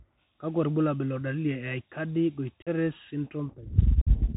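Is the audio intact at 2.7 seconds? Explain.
No. Several Bluetooth headset voice packets were dropped with no concealment from 2.62 to 2.68 s, leaving a hole of about 45 ms with abrupt edges and a quieter restart. Throughout, the Bluetooth CVSD headset codec is narrowband, passing nothing above 4 kHz, and its one-bit adaptive-step coding roughens s sounds and adds a granular hiss.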